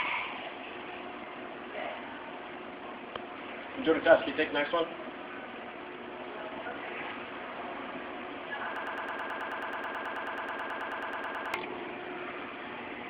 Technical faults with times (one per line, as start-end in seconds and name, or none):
8.76-11.54 broken-record loop